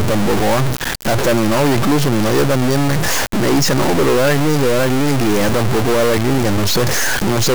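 A harsh, buzzy distortion runs through the whole of this speech recording, riding on every syllable and filling the pauses with a gritty noise floor instead of silence. The likely cause is a stuck bit, one data line held permanently high or low, so roughly half the samples are pushed off by a step of about -10 dBFS. Because that bit flips meaning around zero, quiet gaps get loud hash rather than staying clean.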